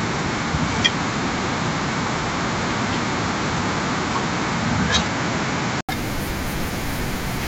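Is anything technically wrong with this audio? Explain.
Yes. From 0.0 to 5.89 s, audio is band-limited with nothing above 7.7 kHz, likely an input switched to a poorer device, then an 80 ms gap before fuller sound returns; spectrograms show the ceiling and gap.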